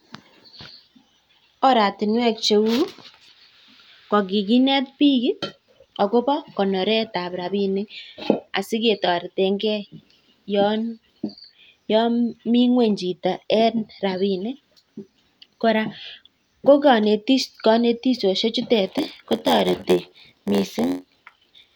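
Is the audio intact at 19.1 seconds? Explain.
No: a block size mismatch (padded) runs from 18.85 s to the end. Zero-filled short blocks, which fits 512-sample reads, add an 86.1 Hz buzz and slow the speech to 0.938 speed with unchanged timbre.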